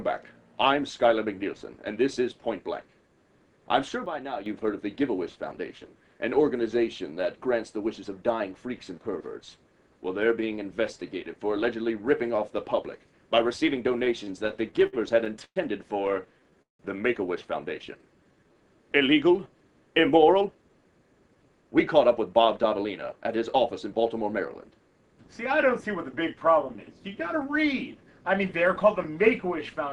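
At 4.06 s there's a sudden gain jump: the level drops by about 9 dB in one step and holds to 4.46 s. It's likely a gain setting applied without any ramp, so the background drops right along with the sound.

From 14.05 to 15.58 s you get repeated stalls, a stutter. Packets kept showing up late, the buffer ran dry eleven times, and the receiver stretched the last sound to fill about 284 ms, with the longest hold at 114 ms. Nothing's lost, but it drags and hiccups.

Then there's a jitter buffer slow-down from 16.26 to 16.56 s. The receiver repeats pitch periods to rebuild its reserve, adding 41 ms, so the sound plays at about 89% speed with unchanged pitch.

Right after, from 16.62 to 16.81 s, comes a call audio freeze, likely packets held up in transit. The last sound is carried on and then drops to near silence for about 150 ms. It resumes where it stopped, with 173 ms of delay inserted.

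A second slow-down runs from 17.86 to 18.55 s. This one is stronger, at about 85% speed with 111 ms added, so things sound drawn out.

Finally, from 20.34 to 23.29 s, there's a jitter buffer speed-up. Short pitch-period chunks get trimmed to shed about 0.3 s of backlog, so the sound runs around 111% speed and feels a bit hurried at the same pitch.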